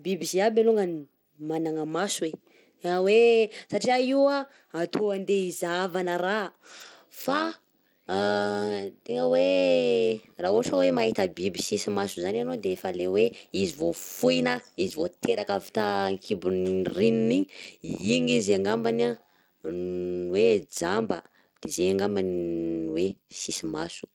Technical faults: Bluetooth SBC compression; overlap-add ripple

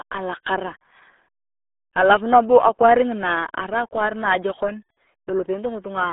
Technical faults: RealAudio 14.4 codec

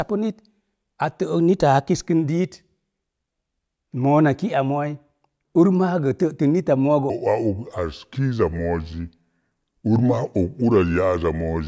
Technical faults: wrong sample rate

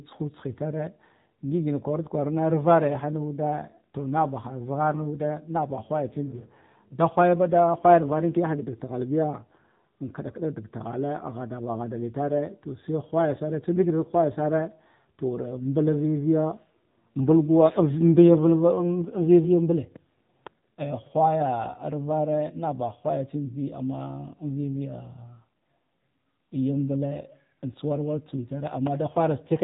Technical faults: AMR narrowband mobile codec

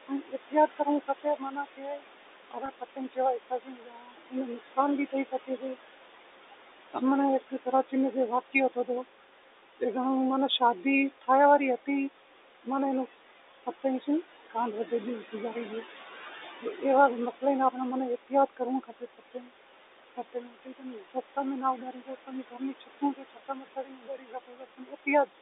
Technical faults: noise suppressor artifacts; speech cut by the noise suppressor; packet loss with pitch repetition

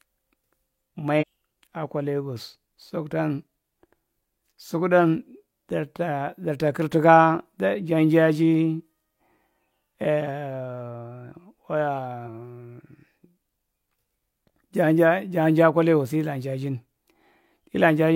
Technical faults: damaged data in a compressed stream

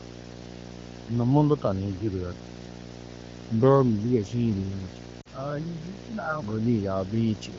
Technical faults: video or display buzz; lost AMR speech frames

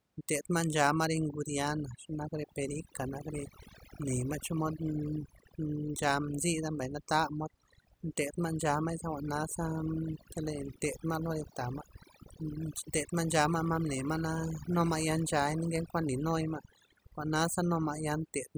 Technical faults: overdone noise removal

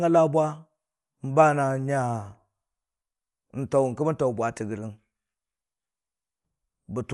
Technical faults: Dolby Digital compression

